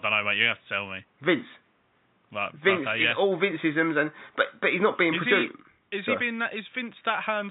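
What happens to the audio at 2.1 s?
Nothing goes wrong at 2.1 s: the speech carries on intact, with only the room noise sitting about 44 dB below it.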